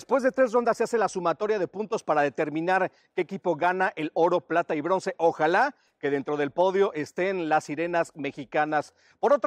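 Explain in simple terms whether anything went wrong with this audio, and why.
Nothing went wrong here; I listened all the way through and didn't catch a single technical problem in this audio.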